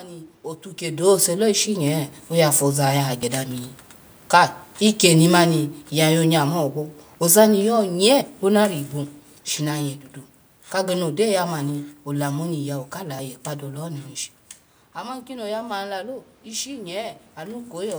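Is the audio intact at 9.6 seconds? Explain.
Yes, the audio is intact at 9.6 seconds, with no fault at that moment; the background noise of the room the microphone was in is part of the recording.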